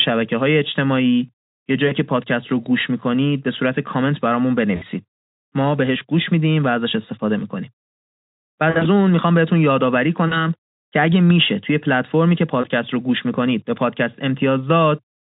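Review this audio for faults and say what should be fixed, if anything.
VoIP packet loss concealed by the speech codec: packets dropped at 1.87–1.94 s (about 40 ms), 4.75–4.83 s (60 ms), 8.69–8.90 s (100 ms scattered over 160 ms, longest gap 60 ms), 10.27–10.47 s (40 ms) and 12.61 s (20 ms, fitting a single frame). The Speex decoder extrapolated from its last pitch and filter while fading the gain, so the speech smears into a dwindling buzzy tone or coloured noise and stays weak briefly after packets resume. Add a jitter buffer with forward error correction or redundant frames to reduce the losses.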